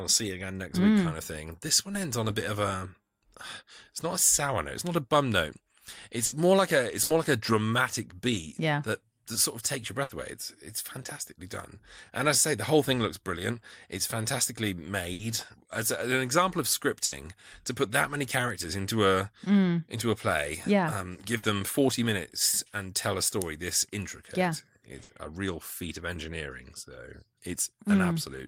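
Burst of packet loss strikes seven times: at 6.25, 7.03, 10.03, 15.13, 17.05, 21.37 and 25.03 s. Each lasts 90 ms. Packets were lost or came too late. The receiver stretches the last sound into a fading buzz or hiss. Then it jumps ahead, skipping audio.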